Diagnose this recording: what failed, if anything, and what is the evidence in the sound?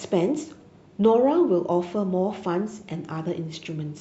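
DAB burbling damages the speech in two bursts, from 0.43 to 0.85 s and from 2.69 to 2.88 s. The failure lies in broadcast reception and MP2 decoding. Both stretches carry short blips of noise in single sub-bands. With weak reception, residual bit errors at a rate well under one percent slip past error correction and corrupt samples and scale factors. Individual sub-bands then jump in level for up to a frame.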